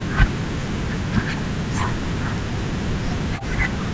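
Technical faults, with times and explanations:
0.00–0.31 s, speech suppressed in double talk: the speech sinks by roughly 40 dB, nearly to silence, for about a third of a second. This is likely an echo canceller treating overlapping far-end talk as echo and turning the near talker down with it.
0.48 s to the end, speech suppressed in double talk: the same deep dips of roughly 40 dB return and chop the speech for about 3 s in all, likely from continued double talk. The call path's band, which stops at 8 kHz, is unaffected.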